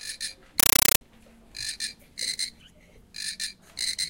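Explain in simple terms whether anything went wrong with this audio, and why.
From 0.60 to 1.01 s, a compressed stream played as audio replaces the sound with loud, chattering static. Coded data was treated as ordinary samples instead of being decoded, likely a Dolby Digital stream. Each 8 ms noise burst repeats 31 times a second.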